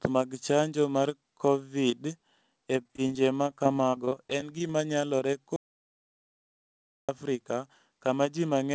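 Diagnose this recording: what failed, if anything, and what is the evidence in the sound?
Network stage first: repeated packet loss from 2.82 to 4.70 s, 19 short gaps up to 40 ms, patched by stretching prior sound, so it turns choppy.

Then an audio dropout to silence from 5.56 to 7.09 s: 1.52 s of dead silence with no room tone, likely a lost input or link upstream.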